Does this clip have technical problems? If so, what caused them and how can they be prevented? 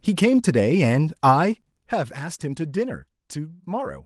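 Yes. Zipper noise runs from 1.60 to 2.13 s. The level falls about 10 dB in unsmoothed 1 dB steps, roughly twenty per second, each causing a tick. On the waveform this shows as a staircase envelope, and on the spectrogram as thin vertical lines. Ramping the gain sample by sample, or smoothing it, prevents it.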